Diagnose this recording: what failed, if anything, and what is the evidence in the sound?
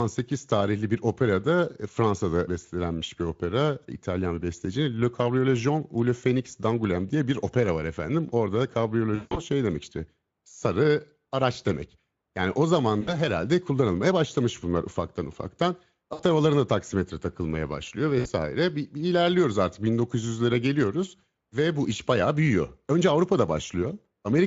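Packets were dropped on the network and the Speex decoder extrapolated from its last pitch and filter: VoIP packet loss concealed by the speech codec. At 9.15–9.43 s, 180 ms is synthesised and smears into a buzzy tone or coloured noise that fades. Shorter 60 ms gaps at 13.01, 16.13 and 18.19 s leave brief weak or distorted patches.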